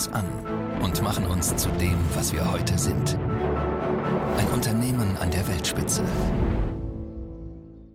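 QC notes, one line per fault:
3.38 s skip ahead: about a fifth of a second of audio is dropped and playback jumps forward with no gap, so the two sides butt together abruptly.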